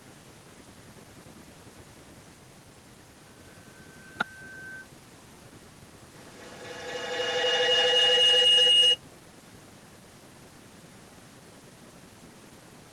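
From 6.14 to 9.53 s a feedback howl builds to about 28 dB above the speech: a microphone-to-loudspeaker loop gains level on each pass, narrowing to a tone near 3 kHz, with the loop repeating roughly every 200 ms. Unlike an echo, the repeats grow rather than fade.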